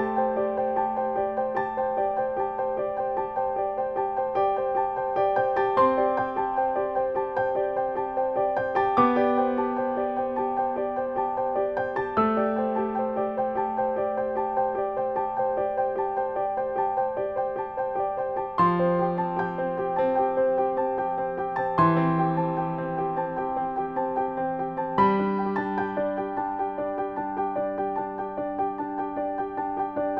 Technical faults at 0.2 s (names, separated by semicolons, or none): none